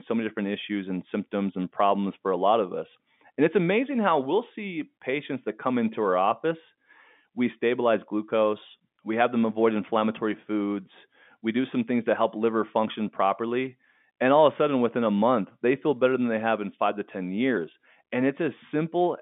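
Nothing in this speech recording stands out as a technical fault. It comes over a G.711 telephone line, so the sound is held to roughly 150 Hz to 3.6 kHz, with at most a faint trace of the coding underneath.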